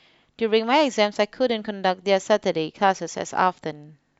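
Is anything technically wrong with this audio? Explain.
No, nothing in this speech recording stood out as a technical problem on listening.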